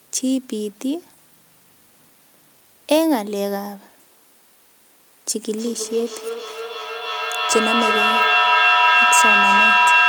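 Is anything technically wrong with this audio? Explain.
Yes. From 5.44 s to the end there is feedback echo between two devices: a second device on the same call replays this microphone's audio, which is picked up again beyond the echo canceller's reach. The speech returns roughly every 300 ms, thinner and ringing, with repeats building to about 5 dB above the speech.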